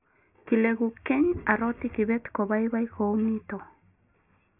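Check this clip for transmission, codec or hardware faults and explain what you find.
Checking this clip turns up nothing to explain.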